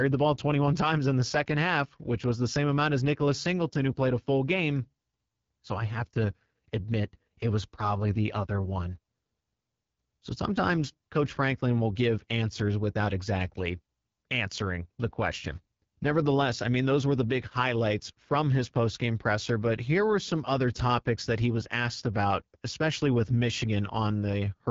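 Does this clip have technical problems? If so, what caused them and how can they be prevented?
Yes, the whole clip carries AMR wideband (HD Voice) codec damage, and it's plainly audible. The speech sounds rough and raspy, which points to one of the two lowest rates, around 8.85 kbit/s. Nothing reaches above 7.5 kHz. To prevent it, use 12.65 kbit/s or higher.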